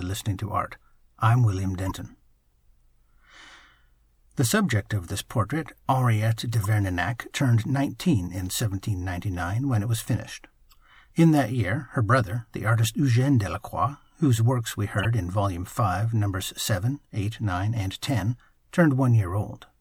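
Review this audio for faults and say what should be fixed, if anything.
Corrupt frame decoded at 1.86–1.91 s, 6.62–6.66 s, 10.71–10.74 s after "when it was finished", and 14.98–15.05 s after "whose works we". In each case two or three compressed frames with flipped bits were decoded anyway, so misread gains and codes put energy at the wrong frequencies. Each event is a short chirp or blip; the last is the loudest and the third is faint. To prevent this, verify each frame's integrity with a checksum and conceal damaged frames instead of playing them.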